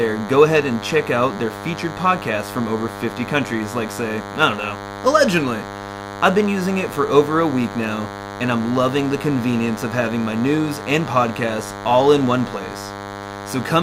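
A DECT cordless phone buzz runs under the speech from start to finish. A DECT handset or base station nearby transmits a brief radio burst every 10 ms. Some part of the audio path picks up these bursts and rectifies them into sound. The result is a steady, thin buzz at 100 Hz, rich in harmonics. It sits only about 10 dB below the speech, so it stays clearly audible throughout.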